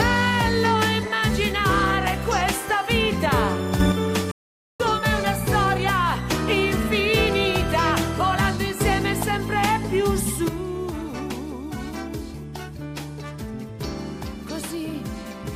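At 3.8 s everything, background noise included, jumps up about 6 dB for a moment until 3.92 s, likely a sudden gain jump from a setting applied without a ramp. Then from 4.31 to 4.8 s the sound cuts to silence and resumes right where it stopped. That's a rebuffering stall that adds about 0.48 s. From 10.48 s to the end, the level drops about 9 dB in one step, again likely a sudden gain jump.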